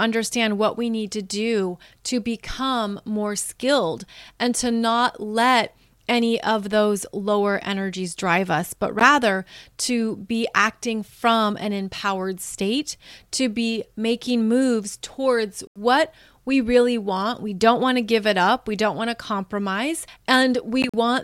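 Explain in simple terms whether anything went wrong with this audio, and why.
The speech cuts out briefly three times: once at 8.99 s, once from 15.67 to 15.78 s, and once around 20.82 to 20.94 s, where it stutters through a few short gaps, the longest about 42 ms. Each hole is silent, and the voice picks up as if it kept going underneath. That's a Bluetooth dropout, likely from audio packets arriving too late for the headphones and getting thrown away.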